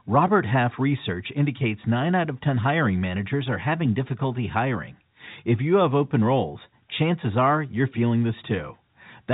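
No technical faults occur at any point in this speech, which comes through the narrow telephone band of its G.711 coding.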